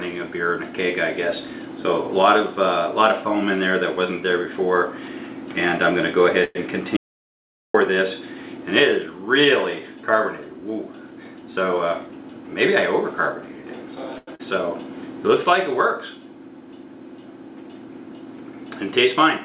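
The audio comes through a call path whose band stops at 4 kHz, which fits narrowband G.711 mu-law coding at 64 kbps, and four faults are audible. From 6.44 to 6.57 s there is a call audio freeze: packets were likely held up in transit long enough for the jitter buffer to run dry. The receiver carried the last sound forward for about 110 ms, and this is heard as a fading buzz that ends in roughly 20 ms of silence before the audio resumes where it stopped. Nothing is lost, but the stream now runs about 110 ms later. Shortly after, from 6.97 to 7.74 s, an audio dropout to silence occurs. The input feeding the recorder was likely cut off, whether by a lost link, a device disconnecting or a mute, and silence was written in its place. The sound breaks off mid-flow into silence with no room tone for about 0.78 s, and whatever occurred in that stretch is gone. At 14.18 to 14.29 s a short stall from a late packet appears. 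One packet missed its playout slot, so the buffer emptied and the decoder stretched the preceding sound for about 93 ms until the packet arrived. The audio then picks up from the same point with nothing dropped, and the stall is heard as a held, faintly buzzing sound. Immediately afterwards, at 14.35 to 14.41 s, there is a short concealed packet loss. About 40 ms of audio never reached the decoder in time, and the receiver extrapolated roughly 41 ms of substitute sound before blending back into the real signal. That produces a brief smear or wobble, and the original content of that moment is missing.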